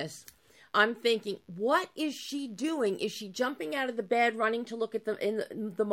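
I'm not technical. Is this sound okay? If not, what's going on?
Yes, this sound is okay. Nothing in it points to a technical problem.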